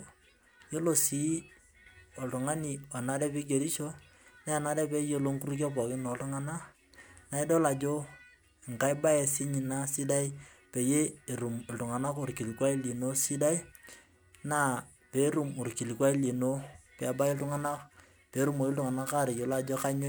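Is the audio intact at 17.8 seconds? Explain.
No. At 17.8 seconds the speech is affected by sample clock jitter, which runs from 17.13 seconds to the end. The converter's clock wanders by a few microseconds. Each sample lands slightly early or late. Where the waveform changes fastest, that timing slip becomes the largest amplitude error. The result is a grainy hiss riding on the speech, roughly 25 dB below it. It grows on loud and sibilant sounds and disappears in the pauses.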